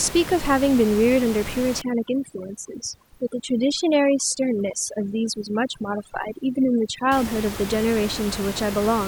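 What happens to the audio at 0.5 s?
Nothing goes wrong at 0.5 s: the speech is intact there, with only the room's own background noise, about 11 dB below the speech, sitting underneath it as part of the recording.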